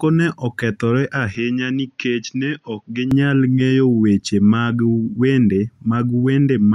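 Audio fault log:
1.35–3.11 s, input switched to a poorer device: just after "ne okethore" the speech turns duller and boxier and drops by about 5 dB, with no gap at the switch, then returns to full clarity before "ng’eyo weche mag wende". The likely cause is the recording input moving to a narrower-band microphone or headset profile. On a spectrogram, energy above 6.6 kHz vanishes for that stretch, leaving a flat ceiling. The waveform envelope shrinks slightly, and a faint new noise floor sits far below the speech.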